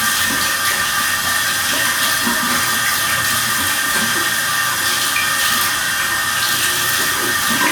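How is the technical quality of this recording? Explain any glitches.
No technical glitches can be heard in this recording of sounds. There is nothing here that needs explaining.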